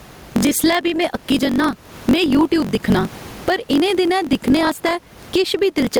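Gain pumping runs through the whole speech clip, with the gain swinging by roughly 15 dB. The likely cause is input gain set far too high for the microphone, with a fast limiter or compressor clamping down on each peak and then releasing. Loud and quiet passages sit squashed close together, and the room noise sits normally about 36 dB under the speech.

Block size mismatch (truncated) is also present from start to finish. A low buzz at 46.9 Hz sits under the audio, and everything runs 1.12 times fast while the timbre stays. This fits one stage producing longer blocks than the next stage reads, with reads of 1024 samples. The end of each block is discarded, so a slice of sound goes missing at every block boundary. The regular seams produce the buzz, and the lost material shortens the playback time.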